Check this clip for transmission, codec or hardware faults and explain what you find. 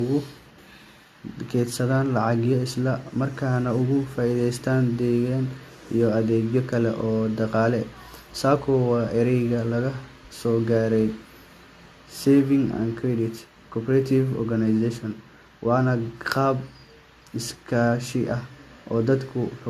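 One fault runs through the whole clip: generation loss. The speech sounds swirly and hollow from start to finish. Nothing is left above 14 kHz. Consonant attacks are soft and smeared. The likely cause is repeated lossy coding, with the audio decoded and re-encoded about three times through AAC-LC. The character fits a rate near 64 kbit/s. Each pass quantises again on a shifted frame grid. Noise and spectral gaps pile up beyond what one encode would leave.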